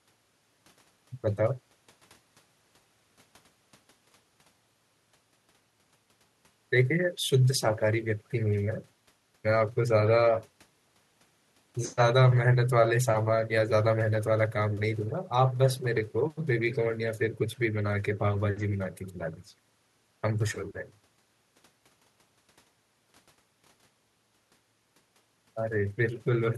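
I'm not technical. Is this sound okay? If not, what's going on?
Yes, it sounds fine.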